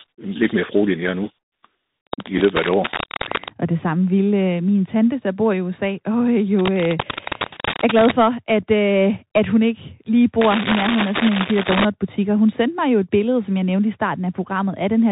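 Throughout, the Bluetooth CVSD headset codec limits the speech to narrowband: a spectrogram shows nothing above 4 kHz, with granular hiss, scratchy sibilants and slope-overload distortion on loud high sounds. From 2.07 to 3.50 s, 6.59 to 8.12 s and 10.41 to 11.85 s, cable scratch noise appears as dense, uneven broadband bursts, most likely from a worn cable or connector being moved. The first two are roughly as loud as the speech, and the last is a little louder. At 7.16 to 7.18 s, a Bluetooth headset packet repeated shows as a repeated waveform segment and gives a brief buzzy tick, consistent with two lost packets. At 8.63 s, a single repeat makes a faint tick.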